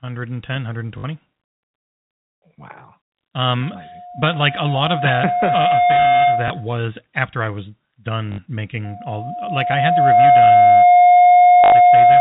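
At 0.98 to 1.04 s, packet loss with last packet repeated: about 60 ms lost, filled by replaying the previous 20 ms chunk, giving a robotic stutter rather than a gap. From 3.62 s a loudspeaker feedback squeal at 714 Hz swells over roughly two seconds to about 10 dB above the speech. Unlike a steady hum, it is a single growing tone from the mic hearing its own loudspeaker. A single 20 ms repeat at 6.48 s blips under it, and the squeal stops at 6.76 s, just before "after I was". Another 60 ms stutter follows at 8.32 to 8.38 s, right after "after I was". The squeal returns at 8.84 s, building faster, over about 1.5 s, and it runs to the end with an 80 ms stutter at 11.64 to 11.72 s.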